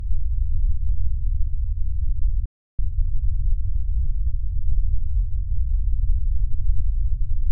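At 2.46 s the audio just drops out and stays silent for about 330 ms, until 2.79 s, then carries on where it left off. That's a playback stall, most likely the player running dry on data or its thread getting blocked for a moment. Right after, from 2.79 s to 4.97 s, you get time-compressed catch-up: the player trims its backlog by snipping out small slices and cross-fading the joins, so the sound runs about 1.15 times fast at normal pitch.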